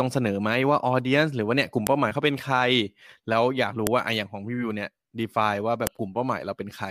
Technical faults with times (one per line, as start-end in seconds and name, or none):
1.87 file header played as audio
3.87 file header played as audio
5.87 file header played as audio